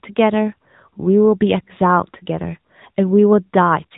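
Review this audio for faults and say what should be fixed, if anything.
AMR narrowband mobile codec damage runs throughout. Nothing passes above 3.8 kHz, and the pulse-driven vocal-tract model leaves the speech plainly buzzy and synthetic, which fits a mid-rate mode near 10 kbps. To prevent it, capture or route the speech over a wideband path rather than a narrowband mobile call.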